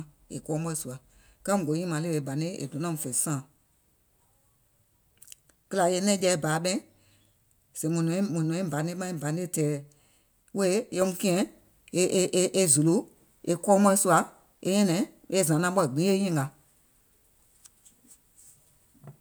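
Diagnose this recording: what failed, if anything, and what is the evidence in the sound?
Nothing in the signal chain has failed that can be heard in this speech recording. No stage, from capture through storage to playback, leaves any audible trace of a fault.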